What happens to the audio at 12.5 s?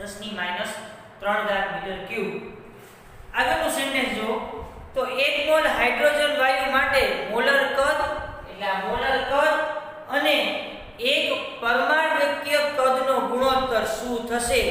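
Nothing goes wrong at 12.5 s; the audio plays through that moment intact, with no dropout, click or distortion.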